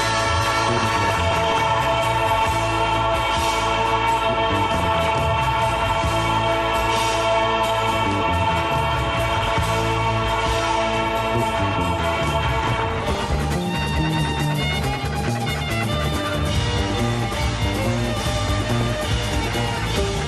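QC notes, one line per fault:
Throughout: MP2 compression, dull top end with gurgly, grainy texture, likely from upper sub-bands dropping out at a low rate, which fits about 80 kbps.
0.61–1.62 s, 4.74–5.10 s, 9.33–9.63 s, 12.66–13.40 s, 18.64–19.01 s: DAB burbling, short noise blips and level jumps as bit errors of about 0.7%, 0.5% in the last burst, make single sub-bands jump in level.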